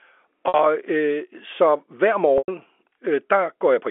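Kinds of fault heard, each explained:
Packet loss with pitch repetition: 60 and 100 ms gaps are bridged by one repeated pitch period, seen as frozen harmonics and decaying waveform.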